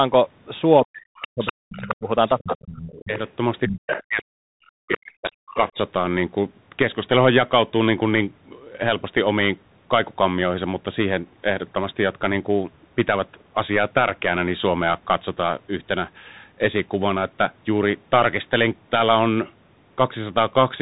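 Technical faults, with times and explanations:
Throughout: Bluetooth CVSD headset codec. The speech passes through the narrowband headset codec, whose one-bit up-or-down steps at 64 kHz cannot follow fast loud changes, so loud high sounds distort; nothing above 3.8 kHz survives, sibilants turn scratchy and a granular hiss sits plainly under everything.
0.82–3.12 s and 4.08–5.77 s: speech suppressed in double talk. In each span the talker's speech dips by roughly 40 dB at its deepest, about one and a half seconds of it affected in the first span and about one second in the second. The likely cause is an echo canceller that could not tell the talker from the loudspeaker echo while both sides spoke.
1.21–1.95 s, 2.28–3.31 s, 3.7–4.23 s and 4.66–5.56 s: other side's voice leaking through. A second voice is heard beneath the talker, about 10, 15, 5 and 15 dB below the speech in turn. This is likely far-end audio from a loudspeaker that the echo canceller failed to remove from the microphone.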